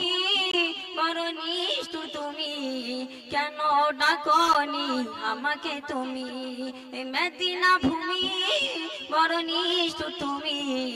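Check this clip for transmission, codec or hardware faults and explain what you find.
Two faults are audible: a comb-filter colouration that lasts the whole clip, and two brief silent holes from gaps between stream segments.

Channel delay (comb filtering) runs from start to finish. One channel arrives roughly 10 ms behind the other, and when they fold to mono, shared content cancels at evenly spaced frequencies starting near 40 Hz. The result is a hollow, phasey tone with static notches. Because the notches never move, it differs from a flanger's sweep or the smeared decay of room reverb.

A gap between stream segments occurs at 0.51 to 0.54 s (about 21 ms) and again at 4.53 to 4.55 s (about 13 ms). Segment timestamps leave a small gap that the player fills with silence, creating a sharp-edged hole. The gaps fall about 4 s apart, matching the segment length. Unlike a packet dropout, nothing is lost: the sound resumes exactly where it stopped, just slightly delayed.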